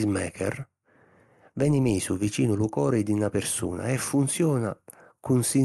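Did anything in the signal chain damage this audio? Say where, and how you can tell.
No, nothing in the chain did any damage here; the speech simply carries the top-end cut-off near 12 kHz you'd expect from a WebRTC call path, which fits an Opus codec running at around 32 kbps.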